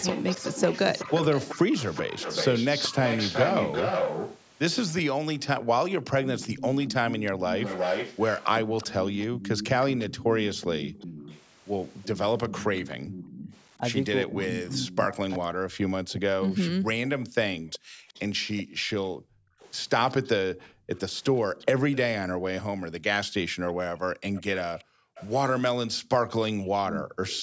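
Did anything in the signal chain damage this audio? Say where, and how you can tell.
Yes, and all of it comes from the call processing stage, specifically the echo canceller on a speakerphone end.

Echo leak is the biggest one. There's a delayed copy of the speech trailing the original by 378 ms, running from 0.00 to 15.36 s at only about 5 dB under the direct signal. It comes back at 17.73–21.97 s and 24.35–25.27 s at about 20 dB down, then 26.88–27.42 s at about 10 dB down. Most likely the canceller failed to model the loudspeaker-to-mic path, so the residual got sent back.

Background gated by the echo canceller shows up as the room sound ducking out while the far end plays. There's a sharp hole at 5.58–5.71 s, about 40 dB deep and around 150 ms long. Between 7.32 and 10.36 s, shallower dips of about 13 dB add up to roughly a third of a second. From 17.79 to 27.23 s, about 3 s in total gets pulled down by about 40 dB. 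That's the suppressor clamping the mic rather than subtracting the echo.

Speech suppressed in double talk happens across 13.78–17.48 s. The near talker's speech gets knocked down hard, around 40 dB at the worst, for about 3 s in total. That pattern is likely the canceller losing track when both ends spoke at once and suppressing everything, talker included. The 8 kHz top end comes from the call's normal mic processing and isn't part of the damage.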